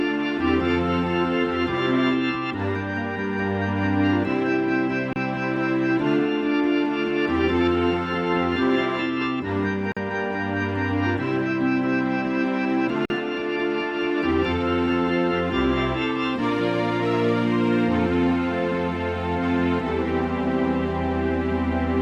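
Gaps at joins of encoded pieces fall at 5.13, 9.92 and 13.05 s, lasting about 30, 45 and 48 ms. Separately encoded sections were butted together with their start delay and final-frame padding left in, so the sound drops to silence with smeared edges, then resumes where it stopped.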